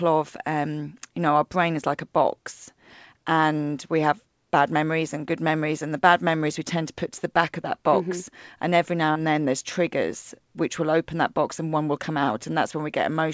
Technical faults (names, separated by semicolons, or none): short concealed packet loss